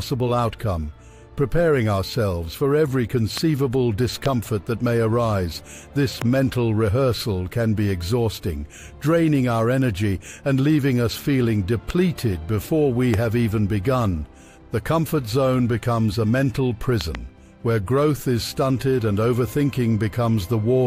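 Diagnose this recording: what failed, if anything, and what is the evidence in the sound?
Loud pops at 3.38, 4.26, 6.22, 11.9 and 13.14 s, and a double pop at 17.0–17.2 s. These are likely voltage transients in the analogue wiring that sit on top of the continuing sound. They appear as full-band vertical spectrogram stripes and waveform spikes well above the signal.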